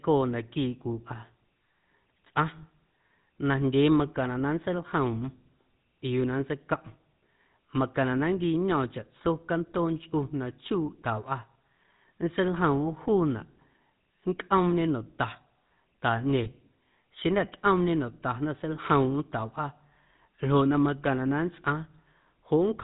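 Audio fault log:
Throughout: GSM full-rate codec. The speech carries a plainly audible buzzy, gravelly roughness from the first GSM speech codec, which fits a 13 kbps full-rate stream. The codec models the vocal tract as a filter and drives it with a sparse train of regularly spaced excitation pulses, retaining only one excitation sample in three, so fine detail in the voicing is replaced by a coarse pulsed texture. Nothing above 4 kHz survives, leaving the sound band-limited and dull at the top.
16.44 to 16.47 s: lost GSM frames. A brief 20 ms dropout is heard as a short rough, metallic ring rather than a gap, which points to a single lost frame. The decoder concealed it by reusing the parameters of the last good frame, so the previous sound is momentarily frozen and buzzes before normal decoding resumes.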